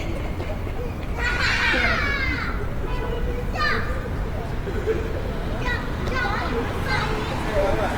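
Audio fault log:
throughout: Opus compression. The damage is plainly audible across the whole clip. Tonal parts turn rough, grainy and noisy rather than clean. There is little swirling and few gaps in the spectrum. Content still reaches about 20.1 kHz, so the band is not narrowed. The likely cause is Opus in its music mode at a low rate, around 24 kbps. With too few bits, it keeps each band's energy but fills the detail with folded copies or noise.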